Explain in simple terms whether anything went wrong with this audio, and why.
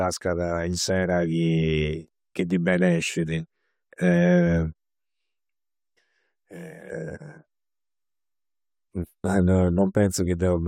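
Nothing went wrong here; no problems can be heard.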